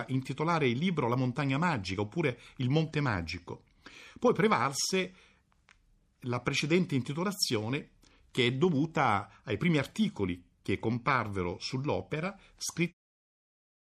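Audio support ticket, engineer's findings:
Engineer's findings: nothing to report on this speech clip, which ends on a smooth editor's fade-out at about 13 s.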